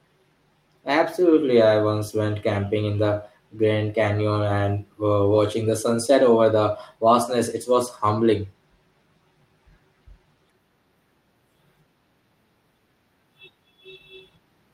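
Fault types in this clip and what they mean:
No audible faults turn up anywhere in this recording.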